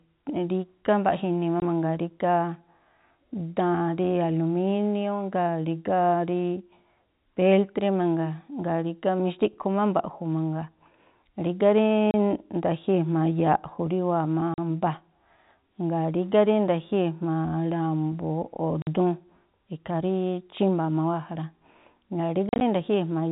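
Speech over a telephone-band channel, cut off above 4 kHz as G.711 coding does, shows packet loss filled with silence: dead holes at 1.6 s, 12.11–12.14 s, 14.54–14.58 s, 18.82–18.87 s, and a scattered cluster from 22.49 to 22.61 s. The gaps last 20, 30, 40 and 50 ms, which fits 10 ms packets. On the waveform these are flat silent stretches. The spectrogram shows blank vertical columns with hard edges.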